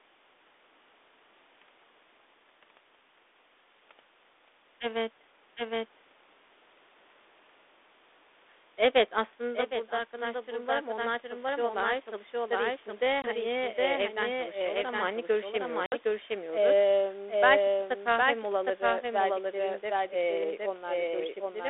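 Throughout, a second copy of the speech runs about 0.7 s behind at roughly equal level, a doubled audio track likely caused by a slower second capture path, giving dry echoes.

From 9.4 to 12.93 s, after the talker moves back around 9.0 s and the input falls about 11 dB, automatic gain rising lifts the level about 4 dB, so voice and background swell together.

At 13.22 to 13.28 s, packet loss on an ADPCM call cuts a 20 ms hole just before "eee evden çalışıyorlar ama". The G.726 decoder's predictor loses step, so speech returns with brief, slight distortion.

At 15.86 to 15.94 s, a second loss leaves a hard-edged 60 ms gap, consistent with roughly three packets, followed by the same slightly distorted recovery that settles within tens of milliseconds.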